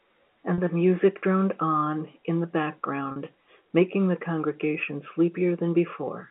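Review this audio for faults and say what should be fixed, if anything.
Two brief packet-loss dropouts with pitch repetition, at 0.55 to 0.58 s just before "the music droned on" and at 3.12 to 3.16 s just before "making the congregation". Each gap is about 40 ms, consistent with two 20 ms packets. The receiver looped the last pitch period to cover them, which gives a slightly held, buzzy moment. On a spectrogram, the harmonics freeze into flat, evenly spaced lines. The waveform shows identical repeating cycles. Adding jitter buffering and forward error correction on the link would prevent it. The G.711 narrowband line itself, 200 Hz to 3.4 kHz, needs no fix.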